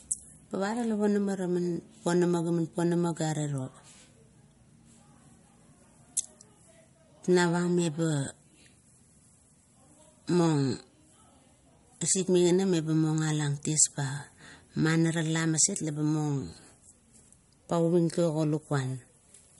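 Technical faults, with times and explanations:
Throughout, low-bitrate audio saved at a high bitrate: the speech has nothing above 11.2 kHz, with the swirly, smeared detail of heavy MP3 compression. This likely comes from an MP3 at around 46 kbit/s later re-encoded at 320 kbit/s. The high rate cannot restore what the first pass discarded. Unlike a plain low-pass filter, the sharp cut-off comes with lossy artefacts. Unlike an honest low-bitrate file, the damage sits inside a high-bitrate MP3.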